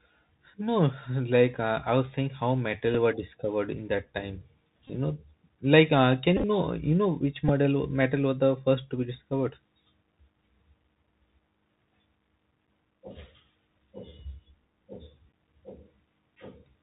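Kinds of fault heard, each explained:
Bluetooth CVSD headset codec: one-bit delta coding caps the speech at 4 kHz, adding scratchy sibilants and granular hiss, a hard empty band above 4 kHz on a spectrogram.
Bluetooth headset packet repeated: lost packets re-decoded, a tick at 2.94 s before "were discovered", brief buzzes near 267 Hz later, repeating 3.75 ms waveform segments.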